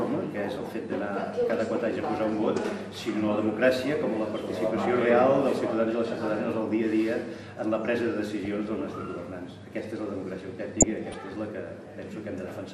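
From the start and right through the clip the sound is dull and plainly gurgling, with a granular edge on everything that remains. This is MP2 compression, most likely at a low bitrate around 80 kbps, where MPEG Layer II runs short of bits for its 32 sub-bands, shuts off the upper ones and quantises the rest coarsely. On a spectrogram the top end stops abruptly, and patches of the higher bands blink in and out from frame to frame.

At 1.43 s there is a brief burst of burbling, followed by a second short one at 8.45 s. From 10.80 to 11.14 s comes a longer stretch of burbling laid over the programme. This is DAB burbling: bit errors, a small fraction of a percent of the stream, slipped past error correction into the MP2 data. Corrupted samples put short blips of noise into single sub-bands, and corrupted scale factors make sub-bands jump in level for up to a frame, and the long event plainly spans many frames. 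A spectrogram shows isolated bright horizontal blocks, each confined to one band. In the waveform they appear as small level bumps that do not match the surrounding envelope.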